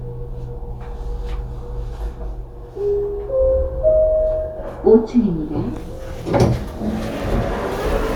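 Nothing stood out on listening to these sounds.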